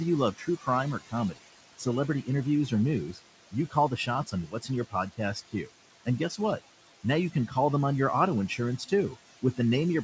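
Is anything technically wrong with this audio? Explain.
Yes. Noise suppressor artifacts run through the whole clip. The suppressor judges each frequency band frame by frame and pulls down whatever it reads as steady noise, here by about 17 dB. The room noise, about 14 dB below the speech, sinks in the gaps and swells back under speech.

Speech cut by the noise suppressor happens twice. From 0.34 s to 6.39 s, starting after "you love", soft parts of the speech are mistaken for noise and pulled down by up to about 17 dB, for roughly a second in total. From 8.48 s to the end, after "them on your auto", they drop by up to about 12 dB. Both times, quiet consonants and word endings sound swallowed or faint.

Nothing is heard above 8 kHz, which fits the G.722 call codec.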